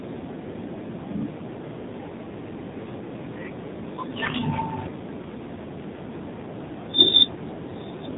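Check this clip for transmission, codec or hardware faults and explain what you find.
Two faults are audible: narrowband mobile coding across the whole clip, and a short burst of bit errors near the middle.

AMR narrowband mobile codec, throughout: the speech has passed through AMR-NB, which samples at 8 kHz and rebuilds the voice from a vocal-tract model driven by a few pulses per 5 ms subframe. Nothing above 4 kHz survives, so the sound is boxed-in and dull. The plainly buzzy, synthetic texture fits a low mode around 7.4 kbps, where too few bits remain to shape the pulses naturally.

AMR bit errors, 4.22 to 4.33 s: for about 110 ms, spanning roughly five 20 ms frames, weakly protected bits arrived flipped at a rate of around 7 percent while the checksum on the critical bits still passed. The decoder therefore trusted corrupted data, placing excitation pulses wrongly and misreading the fine pitch, gain and spectral values. 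Pitch and loudness hold roughly steady, but the voice briefly turns hoarse, scratchy and gargling.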